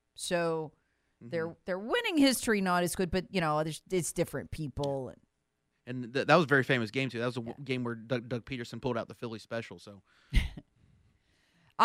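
Nothing goes wrong anywhere in this stretch of speech, so there's no technical fault to point to.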